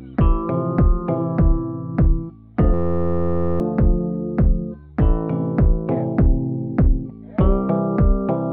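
From 2.74 to 3.60 s, a system hang loop replays one 11.6 ms chunk, which fits a 512-sample buffer, producing a steady 86 Hz buzz and dropping about a second of audio.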